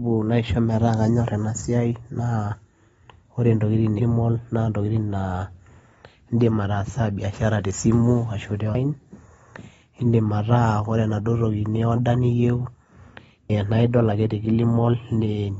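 AAC compression runs throughout: nothing reaches above 7.6 kHz, and the sound is dull and smeared, likely from AAC-LC encoding at a low bitrate around 24 kbps.

Audio missing between chunks occurs at 8.75 s and 13.50 s, where roughly a third of a second is skipped and the two sides are joined directly, likely from processing in 5-second chunks.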